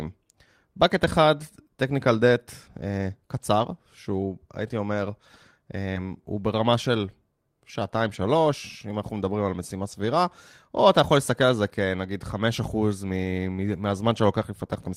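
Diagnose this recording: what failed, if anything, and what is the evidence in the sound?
Short concealed packet loss at 5.93 to 5.97 s, a network fault. About 20 ms of speech never arrived in time, so the decoder extended the preceding sound to cover the hole. It continued it from its pitch if voiced, or as shaped noise if not, then crossfaded back into real audio. The result is a brief smear or wobble lasting a few hundredths of a second, and a short consonant there can drop out.

Lost packet rebuilt from error correction at 5.95 to 5.97 s, 9.91 to 9.93 s and 13.67 to 13.69 s, one packet each time, a network loss repaired at the codec. Each missing 20 ms frame was recovered from the low-bitrate copy that Opus in-band forward error correction carries in the following packet. There is no gap, but those three 20 ms stretches sound rougher and noisier than the surrounding speech. The first coincides with the tail of the concealed loss.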